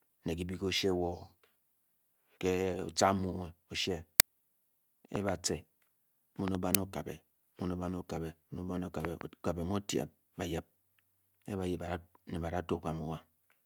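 At 4.20 s and again at 6.75 s, the playback path sends out a buffer before any audio has been written into it, so whatever stale data sits in that memory is played as samples. This uninitialised buffer fault is heard in the speech as a very brief, harsh crack, about 2.67 ms long, which fits a 128-sample buffer being read out unfilled.

Around these, three loud pop events hit the signal, each a pair of sharp pops. They come at 5.16 to 5.31 s, 6.48 to 6.57 s and 9.05 to 9.23 s. A sudden voltage step or pulse, likely from a switching transient or driver glitch, is added on top of the audio. The later circuitry shapes the pulse. The first two pairs peak about 15 dB above the speech and the last about 20 dB above, while the speech continues underneath.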